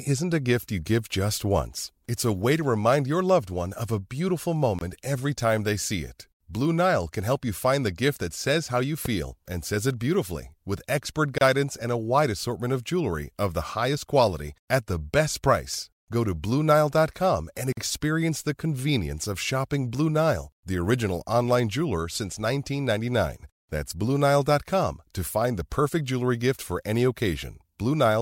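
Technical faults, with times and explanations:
4.79–4.81, 11.38–11.41 and 17.73–17.77 s, gap at a join of encoded pieces: Brief silences of 24, 30 and 47 ms cut the speech. Unmatched encoder delay and padding remain where separately encoded pieces meet.
9.05–9.08 s, loud pop: A single sharp pop sits about 10 dB above the speech, which continues underneath. A sudden voltage step, likely from a switch or static, causes it.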